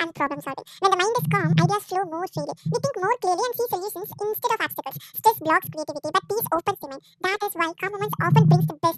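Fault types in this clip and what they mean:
Audio read two samples at a time (double speed): the playback took each pair of samples as one frame, so the speech runs at 2x speed, 12 semitones higher.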